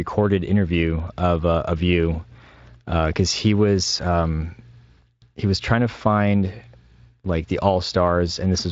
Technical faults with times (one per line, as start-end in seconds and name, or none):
none